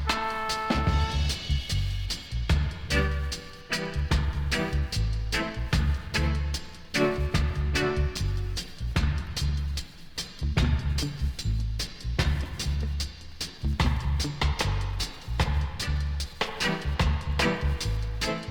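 From 8.17 s to 14.87 s the sound turns coarse and watery and the high end goes dull, at its worst for about 4.6 s before it clears. This is a call bitrate drop: the encoder was starved of bits, which fits a fall from about 128 kbps to 25 kbps.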